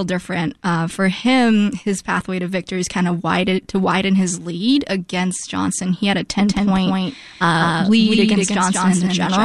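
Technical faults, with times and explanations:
6.40 s to end: doubled audio track. A copy about as loud trails by roughly a fifth of a second. Likely a slower second capture path.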